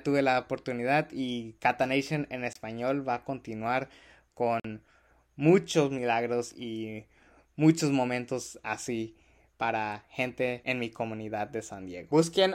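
Two short holes cut into the speech, from 2.53 to 2.56 s and from 4.60 to 4.65 s, with the second about twice as long. This is likely a Bluetooth dropout: missed packets left silence, which fits one and two lost packets, before playback resumed further along.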